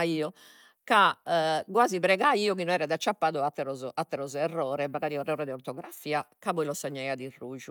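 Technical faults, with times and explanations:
Listening through the recording, nothing stood out as a technical problem at any point.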